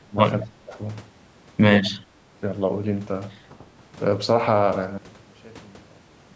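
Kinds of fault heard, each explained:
Speech suppressed in double talk: The speech ducks hard twice near the start, from 0 to 0.18 s and again from 0.42 to 0.79 s, dropping by up to about 25 dB and then about 20 dB. The likely cause is an echo canceller that couldn't tell the near talker from loudspeaker echo while both sides were talking, so it pulled everything down. The call's microphone processing tops out around 8 kHz.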